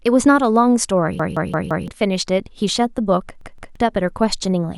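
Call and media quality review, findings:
Repeated buffer, speech stutter at 1.20–1.88 s and 3.41–3.76 s: same 171 ms chunk replays (four, then two extra times), fitting an 8192-sample output buffer underrun. Identical hard-joined repeats, not silence-filled dropout. Roughly 0.7 s and 0.3 s lost.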